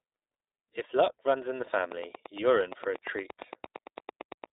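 Throughout, the speech passes through the iLBC codec, whose band ends near 3.8 kHz and whose plainly audible coding damage, consistent with its 15.2 kbps mode, leaves it rough and synthetic. From 1.92 to 4.45 s, likely interference or a faulty connection injects a train of clicks, about twenty regular ticks at 8.73 per second, peaking around 10 dB above the speech.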